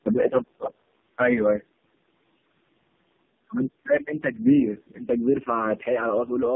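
Throughout the speech, tandem speech coding stacks several narrowband codecs, likely ending in low-rate AMR-NB, so each recodes the last's damage, giving rough, muffled, warbly sound cut above 3.7 kHz, harsher than any single codec.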